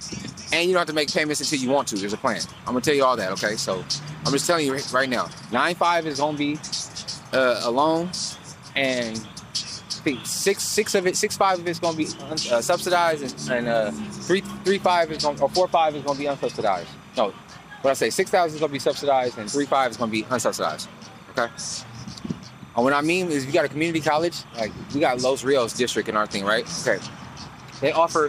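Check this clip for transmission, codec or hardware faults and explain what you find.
One hardware fault is present: timecode bleed, running from start to finish. Linear timecode from an adjacent track or cable is leaking into the audio path. The code is a square wave flipping between two pitches near 1 and 2 kHz, and the pattern fits 29.97-frame code. It sits roughly 30 dB below the wanted sound and is heard as a continuous chirping, warbling buzz underneath everything.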